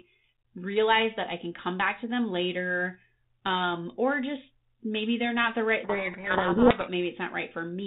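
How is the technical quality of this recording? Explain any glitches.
Telephone-band audio with one clear glitch, near the end. It runs through G.726 ADPCM at 32 kbit/s, so nothing above 4 kHz gets through and there's a faint coding hiss under the speech.

From 5.84 to 6.89 s there's a codec payload misread. The two ends disagree about the bit order inside each G.726 code word, so the decoder reads valid-looking values with their bits swapped around and rebuilds the wrong sample differences. For that second or so the speech is buried in harsh, gritty distortion, and it clears once the packing lines up again.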